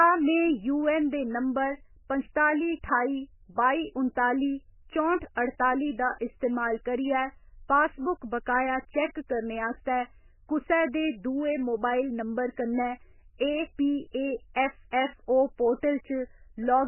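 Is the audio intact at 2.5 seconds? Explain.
No, the speech at 2.5 seconds sits inside damage that runs through the whole clip, likely from MP3 compression. Nothing comes through above 3 kHz, and weak frequency lines flicker between frames, giving a watery, swirly sound with smeared attacks. That fits a very starved bitrate, around 10 kbps.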